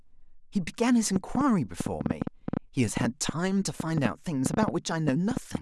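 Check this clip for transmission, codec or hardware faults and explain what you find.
There's one fault here: a train of clicks running from 1.16 s to 5.56 s, around thirty of them at about 6.4 per second with uneven spacing. They're similar in shape and poke roughly 15 dB above the speech, ticking through the pauses too, most likely interference from nearby equipment or a faulty connection or power supply.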